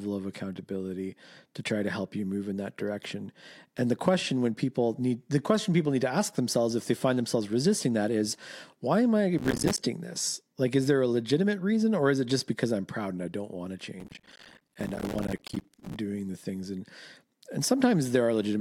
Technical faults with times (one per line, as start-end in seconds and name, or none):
9.38-9.84 processor overload crackle
14.00-15.96 processor overload crackle